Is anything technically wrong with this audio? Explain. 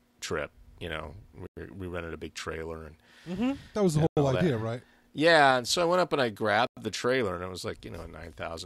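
Yes. The speech has a gap between chunks: it arrives in 2.5-second blocks, and each join gets an extra 100 ms of silence instead of continuing seamlessly. No audio is removed; the stream is just pushed apart at each boundary. The result is three short, hard-edged holes at 1.47–1.57 s, 4.07–4.17 s and 6.67–6.77 s, evenly spaced 2.6 s apart, giving the speech a regular stop-start stutter.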